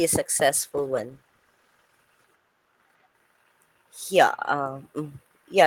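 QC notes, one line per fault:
0.63–2.81 s, call bitrate drop: the speech turns rough and watery, worst for about 1.1 s, as the call's bandwidth estimate fell and the encoder coded more coarsely. The degradation fits a fall from roughly 32 to 14 kbps before quality recovers.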